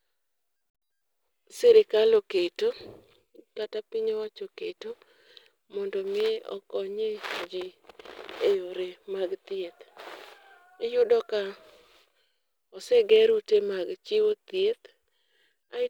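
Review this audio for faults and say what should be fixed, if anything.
Block size mismatch (truncated) runs throughout the speech. One stage writes slightly longer blocks than the next stage reads, so the tail of every block is discarded. Each cut leaves a small discontinuity, and those repeat at the block rate, producing a steady buzz at about 91.9 Hz under the speech. The speed is unchanged at 1.0 times normal, because only a sliver is lost from each block. To prevent this, configure every stage in the chain to use the same block size.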